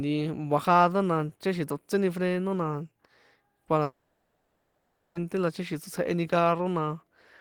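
A long network dropout runs from 3.83 to 5.17 s in this speech clip. For about 1.3 s the speech stops and is replaced by a continuation of the last sound, a buzzy hiss that fades rather than true silence. This is likely a receiver concealing a stretch of audio that never arrived. When the speech resumes, the missing 1.3 s is simply gone.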